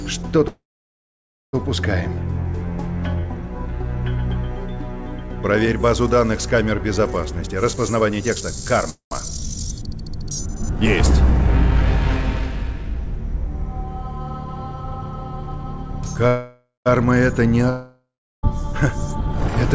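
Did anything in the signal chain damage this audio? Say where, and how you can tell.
Yes, at the network and jitter-buffer stage. There are three call audio freezes, at 0.48–1.55 s, 8.90–9.13 s and 16.27–16.88 s. Each is a fading buzz or hiss into silence, then the sound resumes with nothing skipped, likely from held-up packets draining the buffer.

At 7.29–8.88 s there's a jitter buffer speed-up. The audio runs about 16% fast at unchanged pitch as short pitch-period slices are trimmed, roughly a third of a second in total.

At 17.70–18.45 s a long network dropout fades to silence, and about 0.74 s of audio is lost for good, likely because those packets never arrived.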